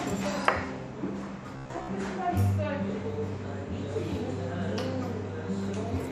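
Robotic sound from repeated short buffers affects this everyday-sound clip from 1.57 to 1.88 s: most of that stretch turns into a rigid, metallic buzz at about 67 Hz, likely because a roughly 15 ms slice of audio was replayed over and over while fresh input was skipped.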